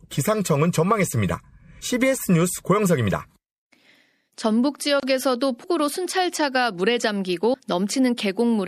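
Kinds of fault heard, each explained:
MP3 compression: Throughout the clip the speech has a watery, swirling quality, with metallic chirps on s sounds and softened attacks, which fits a 64 kbps encoding and likely comes from MP3 coding. Starved of bits, the encoder drops quiet frequency components and cuts the treble. On a spectrogram this shows as a hard ceiling where the upper band goes empty, with speckled patches of energy flickering on and off between frames.
audio missing between chunks: At 1.81, 5.64 and 7.54 s the speech jumps forward abruptly, as if about a tenth of a second has been skipped. This is likely caused by a recorder handling the sound in blocks of about 2 seconds and losing a sliver at each handover. On the waveform the edges on either side are butted together with no silence, leaving a sudden step in shape. The spectrogram shows a vertical seam where formant tracks break and jump.
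gap at a join of encoded pieces: From 5.00 to 5.03 s a short hole of about 29 ms opens in otherwise continuous speech, and the sound then resumes exactly where it stopped. Separately encoded pieces were joined without removing the encoder's leading delay and the padding in its final frame. The waveform drops to a flat line with edges smeared by the codec. The spectrogram shows a narrow blank vertical strip across all frequencies.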